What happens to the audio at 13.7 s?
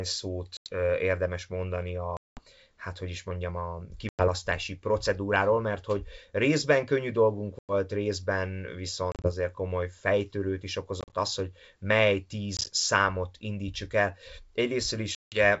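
Nothing goes wrong at 13.7 s: the speech carries on intact through the G.722 wideband telephone coding at 64 kbit/s, with no dropout, glitch or sudden change at that point.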